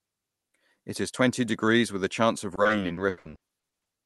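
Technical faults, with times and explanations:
2.55–3.87 s, repeated packet loss (robotic sound): just after "with a chance of", the call path keeps losing or receiving late packets, leaving a rapid string of holes, the longest about 80 ms. The decoder patches each one by stretching the last received sound, so about half a second is filled with repeated material while another half second is simply missing. Because the fills recur so quickly, this stretch of speech turns choppy, with pieces dropped.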